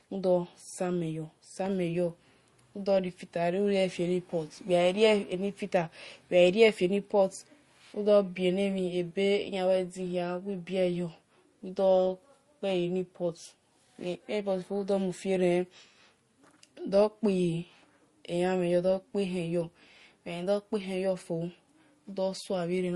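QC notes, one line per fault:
Throughout: transcoding between lossy codecs. Nothing is heard above 12 kHz, and the speech carries two kinds of coding damage at once. The likely cause is a low-rate MP3 encode, roughly 45 kbit/s, later re-encoded as Opus near 48 kbit/s. The second codec spends bits preserving the first one's artefacts, adds its own, and keeps the lower cut-off.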